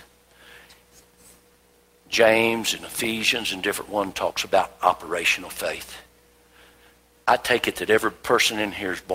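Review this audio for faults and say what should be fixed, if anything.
No faults found, so nothing needs fixing.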